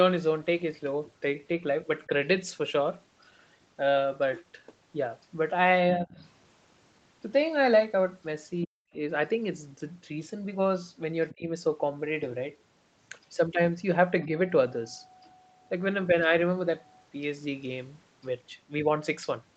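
At 2.07 to 2.11 s the speech dips by roughly 10 dB, likely speech suppressed in double talk, where the echo canceller turns down the talker along with the far-end echo. Deeper dips follow at 5.96 to 6.18 s (about 20 dB) and 8.66 to 8.77 s (about 40 dB, nearly a cutout). Between them, at 6.18 to 6.28 s, a faint second voice sits about 30 dB under the speech, likely the other side's voice leaking through where echo cancellation left a residue. Another brief leak at 11.30 to 11.34 s, about 25 dB down, runs straight into a suppression dip of about 25 dB at 11.35 to 11.49 s. A slight dip of about 5 dB comes at 14.25 to 14.30 s.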